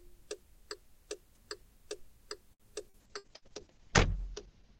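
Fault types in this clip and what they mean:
Repeated packet loss (robotic sound), 2.53 to 3.45 s: packets kept going missing, and each hole was bridged by extending the preceding sound. The passage turns choppy, with four short dropouts, the longest about 62 ms, and roughly a quarter of the stretch filled in.
Call bitrate drop, 3.05 s to the end: the connection's estimated bandwidth collapsed, forcing the encoder onto far fewer bits. The audio turns coarse and watery, its top end falling from 20 kHz to 8 kHz, which fits a fall from 128 to 8 kbps.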